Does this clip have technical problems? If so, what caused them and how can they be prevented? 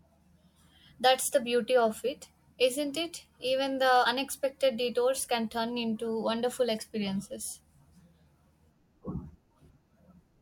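Yes. Compressed frames were skipped at 4.05 s, just before "unexpected detours can turn", and at 9.69 s. The speech jumps ahead about 50 ms, then about 20 ms. The jumps fit whole 24 ms frames being left out. Verifying file integrity before decoding prevents this.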